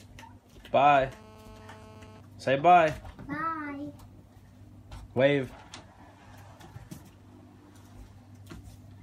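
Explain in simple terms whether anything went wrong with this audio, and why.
From 0.80 to 2.21 s there is a GSM phone buzz. A 2G phone was nearby during a call. It sends radio pulses 217 times a second. The audio circuit picked these up, causing a harsh, raspy, steady buzz.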